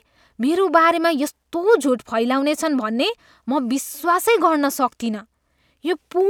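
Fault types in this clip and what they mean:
No technical faults can be heard anywhere in the speech, with the signal level, continuity and timing all holding steady throughout.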